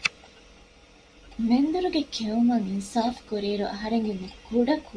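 Nothing in the recording stood out as a technical fault on listening.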